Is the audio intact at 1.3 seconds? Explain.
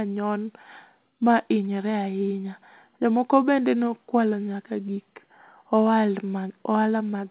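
Yes, the speech at 1.3 seconds is intact, with no dropout, glitch or distortion there.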